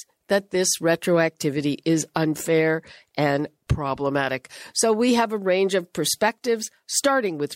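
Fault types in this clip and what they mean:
No technical faults can be heard anywhere in the recording. There is nothing to list for any fault type.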